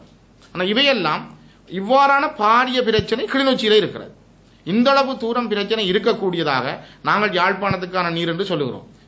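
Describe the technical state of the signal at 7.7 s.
At 7.71 to 7.73 s a single loud pop sits on top of the sound, peaking about 10 dB above it. The likely cause is a sudden voltage step or pulse, from a plug, switch, static discharge or driver glitch, that entered the signal and was shaped by the circuitry after it into a brief thump. Unlike a dropout or gap, the underlying audio carries straight on beneath the pop, with no missing material.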